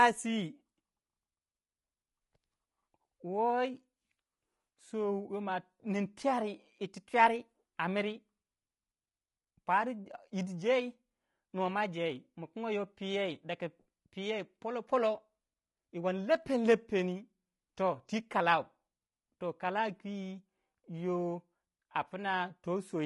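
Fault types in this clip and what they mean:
Low-delay AAC compression: The speech sounds rough and grainy from start to finish. The damage is plainly audible. Noise sits between the pitch harmonics. The likely cause is AAC-ELD, whose short frames blur harmonics. The coarseness fits a low bitrate near 32 kbps.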